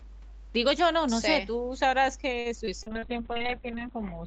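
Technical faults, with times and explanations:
2.39–3.05 s, repeated packet loss (robotic sound): four short dropouts land in quick succession, the longest about 59 ms, so roughly a fifth of this stretch is concealment rather than received audio. Each gap is bridged by stretching out the preceding sound, giving a choppy stutter. On a spectrogram the patched slices show smeared, unnaturally steady harmonics, and the waveform carries brief repeated-looking segments where real detail is missing.
2.84 s to the end, call bitrate drop: the encoder's budget falls from 32 kbps to 6 kbps, staying at the floor for about a second, and the coded bandwidth halves from 8 kHz to 4 kHz. With so few bits the sound turns rough as well as muffled. A spectrogram shows the upper band abruptly emptied above 4 kHz, with blotchy, coarsely quantised texture in what remains.
2.89–3.55 s, jitter buffer slow-down: to build up a reserve, the receiver repeated individual pitch periods and slivers of pauses, adding about 37 ms and slowing playback to about 95% speed without lowering pitch. 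Sounds come out slightly drawn out. On the waveform, identical adjacent pitch cycles appear duplicated. The spectrogram keeps the same harmonic spacing while features stretch marginally along the time axis.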